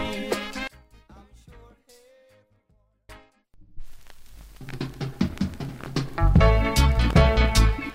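From 0.68 s to 3.09 s the sound falls by about 32 dB and nearly vanishes. The likely cause is one channel inverted, cancelling shared content in mono.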